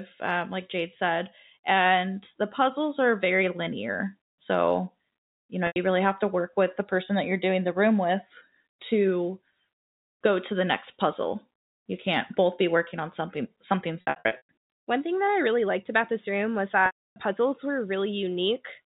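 Packet loss with pitch repetition hits three times. At 5.67 s a 90 ms gap gets patched with a repeated pitch period, giving a brief buzzy hold. Scattered drops follow from 14.01 to 14.49 s, and a 300 ms loss at 16.86 to 17.16 s fades toward silence before the speech cross-fades back.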